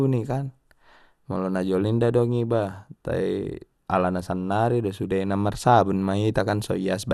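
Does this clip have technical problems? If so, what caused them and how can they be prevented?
Yes. Throughout the speech the sound is dull and carries a gurgling, granular roughness, with nothing above 12.1 kHz. The likely cause is MP2 compression: MPEG Layer II divides the signal into 32 sub-bands and shares out a fixed bit budget, and here the budget, which fits a rate near 80 kbps, is too small, so upper bands are dropped or flicker and the rest are quantised coarsely. Encoding at a higher bitrate or with a more efficient codec would prevent it.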